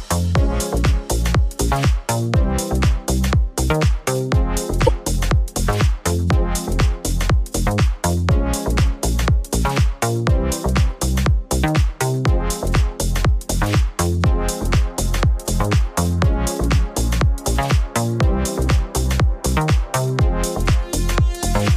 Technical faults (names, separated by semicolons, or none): corrupt frame decoded